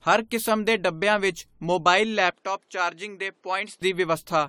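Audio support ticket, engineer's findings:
Generation loss throughout. Swirly, hollow speech, smeared attacks, nothing above 18.6 kHz. Likely repeated AAC re-encoding, roughly seven passes, at around 96 kbit/s.

Input switched to a poorer device, 2.30 to 3.82 s. 20 ms gap, band cut at 11.1 kHz, level down about 5 dB. Likely headset or second mic.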